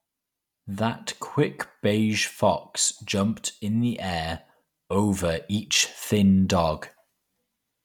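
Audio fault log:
No faults heard anywhere in this speech recording.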